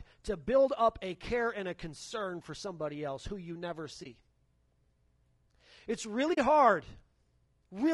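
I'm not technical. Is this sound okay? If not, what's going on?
No, not quite. Two things are going on.

Throughout the clip the speech has a rough, grainy edge, with a hiss between the tones and an artificial-sounding top end. That's likely low-delay AAC compression, the kind used for video calls. It chops sound into very short slices so there's hardly any lag, but at the data rate used here it can't capture a voice cleanly, so the detail gets smeared.

There are also two brief dropouts from AAC frame loss with muting. The first is at about 4.03 s, right after "else who you never", where roughly 20 ms of sound is missing. The second is at about 6.33 s and is twice as long, around 40 ms. In each case a chunk of data never arrived, so the decoder played silence there instead. Because the sound fades out and back in, the first comes across as a brief dip and the second as a soft-edged hole.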